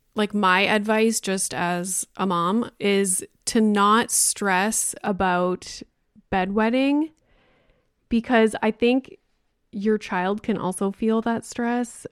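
De-emphasis applied wrongly affects this speech clip from 5.06 s to the end at 12.12 s. Over that stretch the treble falls away on a smooth downward slope, about 14 dB lower at 10 kHz than at 1 kHz, so the sound turns dull and muffled. A high-frequency cut meant to reverse pre-emphasis has been applied where no pre-emphasis existed, or applied a second time, removing brightness the recording actually had.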